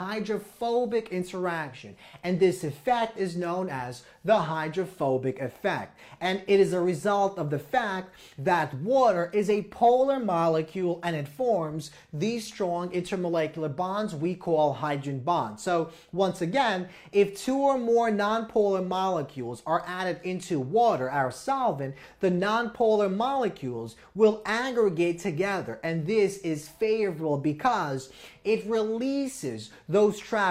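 No technical faults can be heard at any point in the audio.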